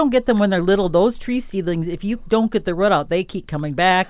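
Nothing in the speech stood out as a technical fault on listening.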